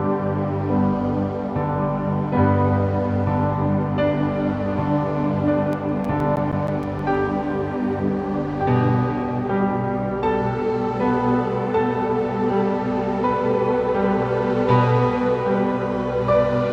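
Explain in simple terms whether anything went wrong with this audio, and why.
Between 5.73 and 7.30 seconds there is a run of CD scratch ticks: eleven short clicks, about seven per second, each lasting no more than about a hundredth of a second. They come from a scratch or blemish on the disc. Each time the damaged spot passes the laser, the player loses more data than its error correction can rebuild, so it guesses or silences those few samples. That happens once per turn of the disc, which is why the ticks are evenly spaced.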